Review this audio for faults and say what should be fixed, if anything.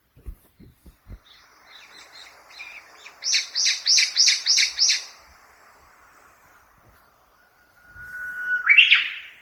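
Throughout the clip, the sound is swirly, smeared and hollow, with blurred attacks, more degraded than a single 48 kbit/s Opus pass would explain. This is likely generation loss from around ten decode and re-encode cycles, each requantising on a shifted frame grid so the errors pile up. To prevent it, keep a lossless master and encode to Opus only once, at the final delivery stage.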